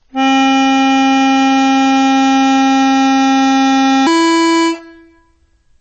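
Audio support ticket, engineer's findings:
Whole clip, MP3 compression damage is plainly audible: music sounds watery and swirly, smeared attacks. Likely a low-bitrate MP3 encode, sounds like around 32 kbps, so the encoder chops the treble and drops weak bands frame to frame.

0 to 4.07 s, section at the wrong speed: music runs slow at 0.81x and sits about four semitones flat, then snaps to normal. Likely a playback or edit step on the wrong clock, so pitch and tempo drop together.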